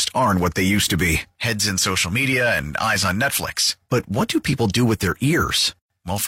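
Damaged data in a compressed stream appears from 2.28 to 2.33 s, a burst of roughly 50 ms in the speech. At that point the encoded file contains bytes that are wrong, whether lost, zeroed or overwritten. The decoder misreads those frames, falls out of step with the frame structure and has to hunt for the next valid header before normal playback resumes. The result is a brief artificial chirp, squawk, click or short hole cutting across the speech.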